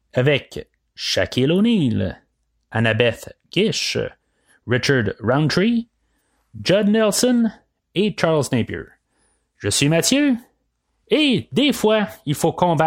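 Nothing in this speech recording stands out as a technical fault at any point, so there's nothing to flag here.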